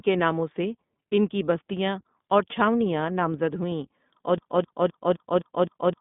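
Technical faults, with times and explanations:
Throughout: iLBC codec. The speech is coded as a narrowband VoIP stream, which fits about 15.2 kbps with 20 ms frames. Nothing above 3.8 kHz survives, and the band is limited to roughly 150 Hz to 3.6 kHz. Each frame's excitation is coded independently, leaving a plainly audible rough, synthetic edge.
4.38–6.00 s: broken-record loop. Right after "چھاؤنیاں نامزد ہُوئیں اور", a 258 ms fragment repeats back to back, six times, until the clip ends. The likely cause is a stalled player, encoder or stream resending its last buffered piece, so the audio meant for that span is lost.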